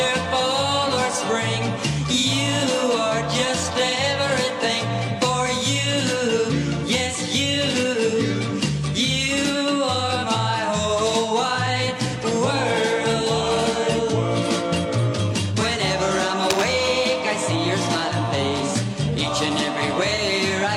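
At 12.08 s a brief smeared patch appears in the sound. It lasts to 12.15 s, covering about 43 ms of lost audio. This is AAC frame loss with concealment. A block of coded audio went missing. The decoder filled the gap by reusing the last good spectrum with altered phase. The result is a short, noisy, phasey blur. Its length fits the loss of a single AAC frame.

From 16.50 s to 16.69 s a dense, rough burst rides over the sound. It scratches and rustles for about 0.19 s. Its level sits only a little below the sound itself. This is cable scratch noise. The likely cause is a worn cable, connector or control being moved. Its contact resistance jumps around rapidly. Those jumps add the uneven crackle.

At 20.15 s the same concealment blur returns, ending at 20.21 s. It is another AAC frame loss with concealment, again covering about 43 ms of lost audio. It again matches one missing frame, patched from the previous spectrum. 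It sounds just like the first: a short smeared, phasey smudge.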